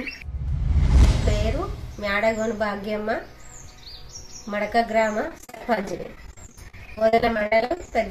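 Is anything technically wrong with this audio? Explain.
Yes, from 5.28 to 7.92 s there's repeated packet loss (robotic sound). Dozens of short gaps, none longer than 57 ms, get patched by stretching the last bit of sound, so about a third of that span comes out choppy, with pieces missing.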